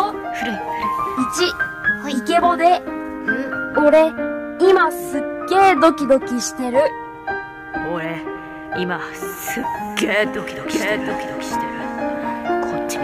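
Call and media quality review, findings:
Doubled audio track from 10.74 s to the end: a full-band second copy lands roughly 0.7 s behind, about 5 dB quieter, dry with no decay, and kicks in abruptly. Likely a second capture path or a misaligned edit duplicating the feed.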